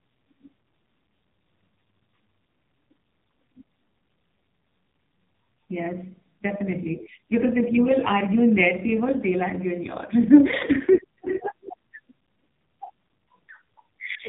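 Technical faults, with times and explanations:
Throughout, AMR narrowband mobile codec: the speech sounds heavily buzzy and synthetic because each short frame is rebuilt from a vocal-tract model driven by a few pulses, which fits the lowest 4.75 kbps mode. A spectrogram shows a hard ceiling at 3.8 kHz.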